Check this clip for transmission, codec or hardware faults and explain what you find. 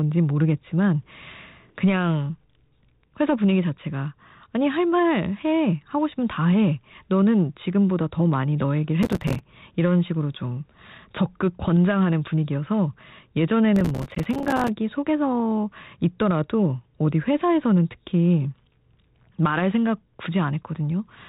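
Two bursts of processor overload crackle stand out. From 9.03 to 9.39 s and again from 13.76 to 14.68 s, a gritty, tearing crackle rides over the speech. The processor repeatedly misses deadlines for its very short buffers, each lasting a few milliseconds. Each miss drops in a sliver of silence with hard edges, and dozens of them in a row merge into this crackle until the load eases. The band-limited telephone sound, with its light coding hiss, fits 32 kbit/s G.726 working normally.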